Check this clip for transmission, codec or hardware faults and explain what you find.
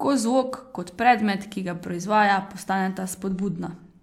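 Checking this clip turns up no faults to explain.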